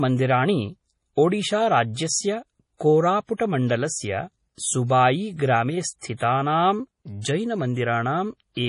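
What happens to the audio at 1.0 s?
At 1.0 s the speech carries heavy damage that is likely from MP3 compression, present throughout the clip. Short of bits, consistent with about 32 kbps, the encoder drops everything above 10.5 kHz and switches weak frequency lines on and off between frames, giving a dull, watery, swirling sound.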